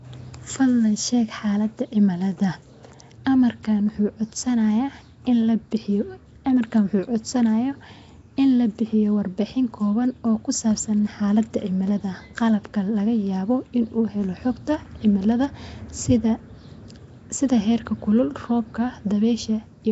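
From start to finish the speech carries a rough, hissy halo and a smeared, underwater quality, and nothing comes through above 7.7 kHz, so the top end sounds dull. The damage is plainly audible throughout. That's likely Nellymoser compression, the old Flash microphone codec: with only a couple of bits per sample, weaker bands get dropped and refilled with noise, which causes the hiss and smear. The sound fits a low bitrate of around 32 kbps.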